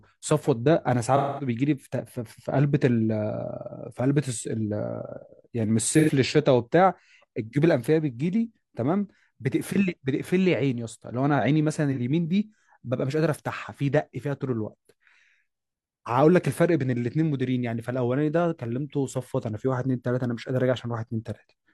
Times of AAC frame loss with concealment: 1.16-1.48, 5.92-6.10, 11.91-11.98

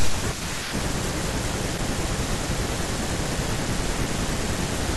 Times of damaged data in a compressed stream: 1.74-1.79

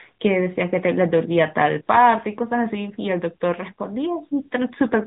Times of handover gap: none

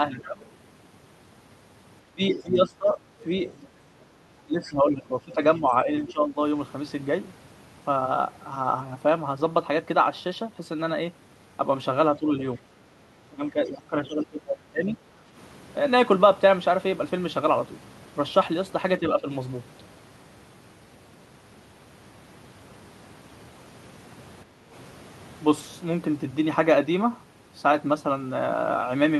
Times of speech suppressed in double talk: 0.12-6.39, 12.18-14.98, 18.99-19.27

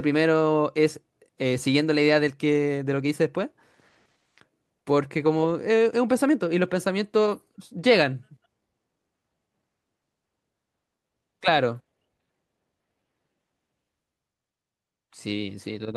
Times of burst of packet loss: none

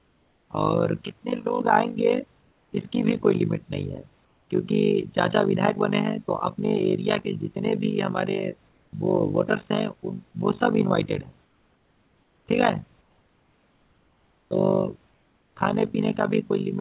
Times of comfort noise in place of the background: 0.00-0.50, 2.42-2.72, 4.25-4.49, 8.69-8.93, 11.45-12.47, 13.01-14.51, 15.11-15.56

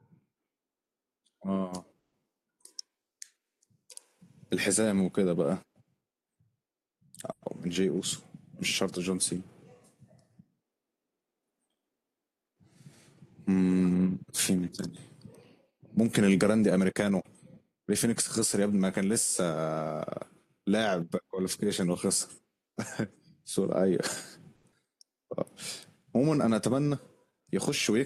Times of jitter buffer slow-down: 24.99-26.23

